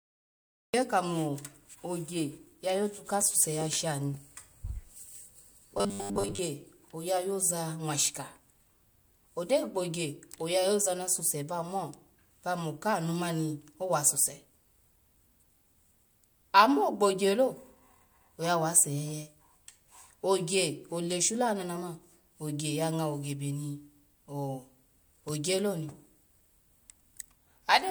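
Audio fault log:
0.00–0.74 s, cut-off start: The clip opens on digital silence, and at 0.74 s the speech appears already mid-sound, with no natural attack or fade-in. Capture or streaming began a moment after the talker had started, so the opening of that sound was never recorded. The jump from silence straight into speech makes the entry feel abrupt and clipped rather than like a real onset.
5.78–6.40 s, robotic sound from repeated short buffers: For about 0.6 s the speech takes on a rigid, metallic buzz fixed at 100 Hz while still loosely tracking the syllables. The likely cause is playback starved of fresh audio, looping the last small chunk instead. A 100 Hz repeat rate fits a chunk of about 10 ms. Most of the stretch is repeated material, so much of the real audio there is skipped.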